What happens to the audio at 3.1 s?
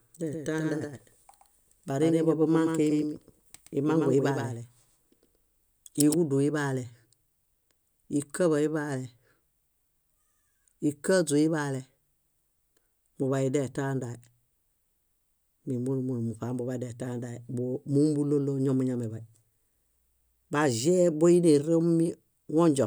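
A second copy of the same speech, likely picked up again through a slower path or left out of step by an edit, is mixed in with the original at 3.1 s. This doubled audio track runs from the very start of the clip to 6.14 s. The copy trails by roughly a tenth of a second at about 5 dB lower and is full-band, with no decay or room colour. Every syllable gets a clean, slap-like shadow that cuts off abruptly at 6.14 s.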